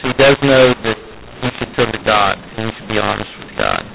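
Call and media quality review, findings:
mu-law and A-law mixed up, whole clip. Speech harsh and distorted, levels scrambled, pauses filled with hiss. A-law G.711 stream decoded as mu-law; mismatched companding curves misplace amplitudes and lift near-silent samples. Check codec negotiation; band limit at 4 kHz as expected.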